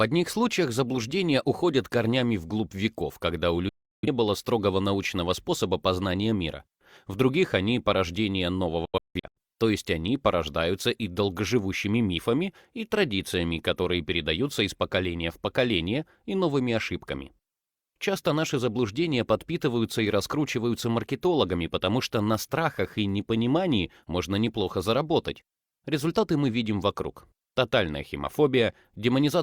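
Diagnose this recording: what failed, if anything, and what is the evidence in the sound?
Digital broadcast dropout at 3.69–4.08 s and 8.85–9.37 s: the receiver lost valid frames and muted with a 3 ms fade. The second dropout breaks into scattered holes, the longest 171 ms.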